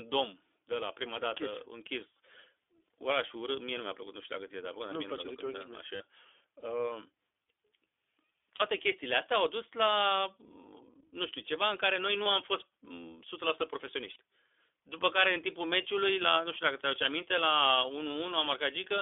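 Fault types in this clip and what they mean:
iLBC codec: narrowband VoIP coding in 20 ms frames makes the speech audibly rough and synthetic, with spectrogram energy confined to about 300 Hz–3.5 kHz.
lost iLBC frames: brief 20–40 ms gaps, such as after "da nici", filled with a repeated buzzy pitch cycle that appears as a short, unnaturally regular waveform stretch.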